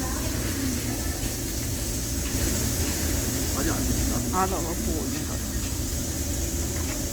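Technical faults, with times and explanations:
Throughout: Opus compression. Tones sound grainy and rough, with noisy fill, yet content reaches about 20 kHz. This is likely low-rate Opus music-mode coding, consistent with roughly 24 kbps.
2.34–4.18 s: doubled audio track. A dry, equally loud copy trails about 0.7 s behind and cuts in and out abruptly, likely from a second, slower capture path.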